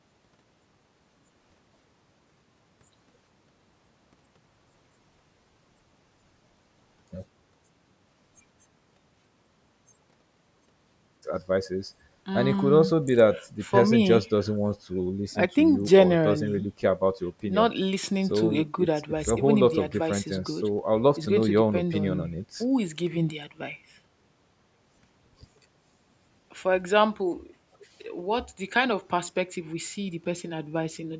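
No technical faults are audible.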